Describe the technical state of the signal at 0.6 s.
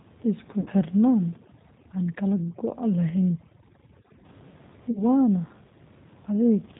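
VoIP packet loss concealed by the speech codec runs from 0.60 to 0.69 s. About 60 ms of audio went missing, which fits three lost 20 ms packets. The decoder bridges the gap by extrapolating from its last pitch and vocal tract filter while lowering the gain each frame, so the speech smears into a fading buzzy tone or coloured noise and stays weak briefly after packets resume.

Underneath, the G.729 codec at 8 kbit/s is plainly audible. It rebuilds the speech from a filter, a pitch predictor and a few pulses per frame, and it cuts everything above 4 kHz, leaving a rough, slightly synthetic quality. Room noise sits about 26 dB below the speech.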